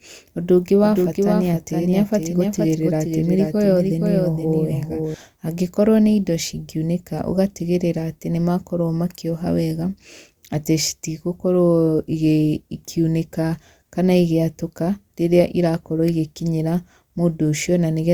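From 0.82 to 5.14 s, the speech has a doubled audio track. A second full-band copy trails about half a second behind, a few dB quieter. It has no room tail and stops abruptly before "angĩkorwo nĩ indo". A slower second capture path is the likely cause.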